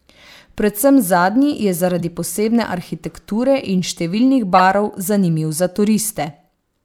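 Corrupt frames decoded: flipped bits in compressed speech frames were played anyway, throwing energy to wrong frequencies. At 1.99 s, after "zadnji je", one frame yields a blip near -15 dBFS; from 4.58 to 4.60 s, before "zanimiv za", roughly two frames burst about 15 dB louder than the first.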